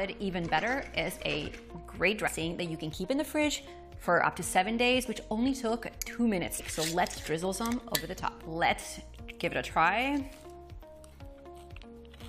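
A short glitch cuts through the audio from 2.26 to 2.28 s, and another at 6.58 s. Both come from damaged data in a compressed stream: corrupted frames are misread and the decoder briefly loses sync before finding the next valid frame header.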